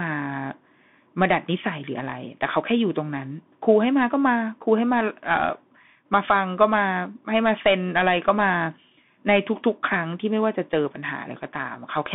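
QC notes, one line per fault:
Throughout: Bluetooth CVSD headset codec. The speech sits in a narrow 150 Hz to 3.6 kHz band, with a granular hiss underneath and scratchy s sounds where the one-bit up-down steps can't keep pace with sharp high energy. That slope-overload grit separates it from plain telephone band-limiting.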